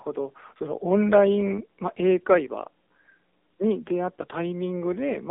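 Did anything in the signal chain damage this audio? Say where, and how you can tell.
Yes, at the codec stage, for the whole clip: this speech has been through an AMR narrowband mobile codec with heavy coding damage. Nothing reaches above 3.6 kHz and the low end thins out below about 250 Hz, giving the boxed-in telephone band. The voice sounds buzzy and synthetic because the codec rebuilds it from a vocal-tract model excited by sparse pulses in 20 ms frames. The degree of artefacting points to a low AMR-NB mode, around 6.7 kbps.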